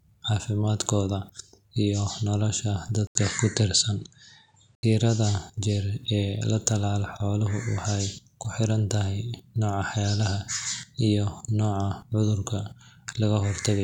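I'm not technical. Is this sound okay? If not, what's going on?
No. Just after "iyo nolosha", from 3.07 to 4.83 s, the sound turns duller, with nothing above about 9.2 kHz, a faint new background noise and a brief 80 ms gap at the change. The loudness stays about the same. The likely cause is the input switched to a poorer device.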